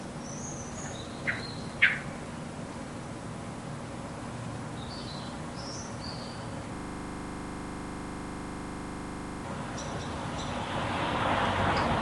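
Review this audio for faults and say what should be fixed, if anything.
A system hang loop runs from 6.76 to 9.44 s. A 40 ms slice of sound repeats exactly, about 67 times, giving a rapid 25 Hz stutter. The waveform shows identical 40 ms blocks, and the spectrogram shows evenly spaced vertical stripes. Preventing it requires fixing the driver or system stall so the output buffer keeps being refilled, or having it mute rather than replay stale audio when refills stop.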